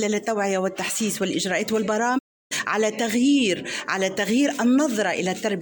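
At 2.17 s the sound quickly fades out over about 20 ms and goes silent. This is a digital broadcast dropout. The receiver stopped getting frames it could decode, either because the signal was lost or because frames failed their error check. It muted its output instead of playing damaged data. The silence lasts about 320 ms, which fits roughly ten lost frames. Sound returns at 2.53 s, further along in the programme. Whatever was sent during the gap is missing.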